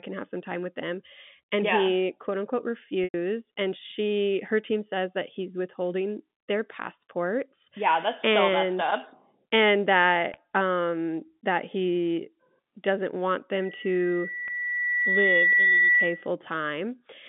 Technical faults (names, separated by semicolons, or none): packet loss with pitch repetition; loudspeaker feedback squeal